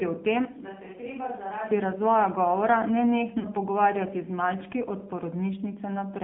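From the start the whole clip carries the AMR narrowband mobile codec: nothing above 3.5 kHz or below 150 Hz, and a buzzy, synthetic edge that fits a low bitrate around 7.4 kbps. Then at 3.40 to 3.49 s come lost AMR speech frames. The decoder stretches the last good sound briefly before "pogovarjati z malčki od" resumes, a gap that fits two dropped frames, about 40 ms.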